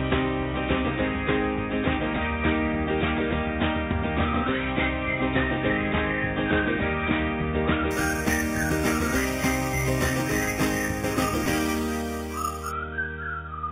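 Imaging from sample-and-hold upsampling runs from 7.91 to 12.71 s. Each sample was held rather than filtered, which fits a jump from 8 kHz to 48 kHz, so mirrored spectra appear, the first between 4 and 8 kHz at about -13 dB, as a bright metallic fizz tracking the sound.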